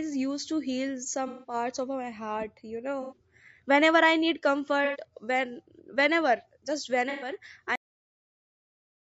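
Low-delay AAC compression runs throughout: the speech sounds rough and grainy, with noise filling the gaps between pitch harmonics and a thin, synthetic top band. This is likely AAC-ELD's short frames spending scarce bits, consistent with roughly 32 kbps.

AAC frame loss with concealment occurs at 1.28–1.54 s, 3.02–3.17 s, 4.85–4.99 s and 7.10–7.30 s. In each gap of about 90 to 150 ms, the decoder rebuilds missing frames from the last good spectrum, leaving a smeared, noisy or phasey patch.

A cut-off end comes at 7.76 s. The final buffers were never written, so the speech stops mid-sound and drops straight to digital silence with no decay, staying silent until the file ends.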